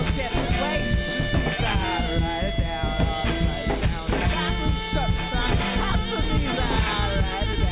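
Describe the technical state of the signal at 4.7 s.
At 4.7 s the music plays through intact, with no dropout, distortion, clicks or other fault at that point.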